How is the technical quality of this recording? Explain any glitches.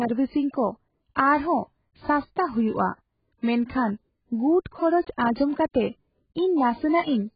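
The quality is poor throughout. The whole recording sounds dull and smeared. Nothing reaches above about 4.9 kHz, so sibilants lose their crispness and turn fizzy, and steady sounds warble. The likely cause is heavy AAC compression, which fits AAC-LC at a very low bitrate near 12 kbps. At that rate the encoder drops the top of the spectrum. It spends too few bits on the rest, leaving gaps and coarse, noisy detail in the speech.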